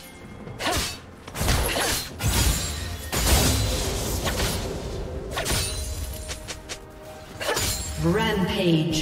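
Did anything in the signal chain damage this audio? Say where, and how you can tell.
No, nothing in the chain audibly damaged it.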